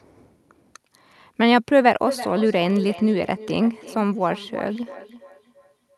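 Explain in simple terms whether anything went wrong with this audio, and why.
Something did go wrong. From about 2.06 s to the end, the speech picks up a feedback echo between two devices. Two devices in the same room were on the call, so one played the other's sound aloud, and that microphone caught it again. Each echo canceller only removes its own playback, so the sound comes back roughly every third of a second, quieter than the speech.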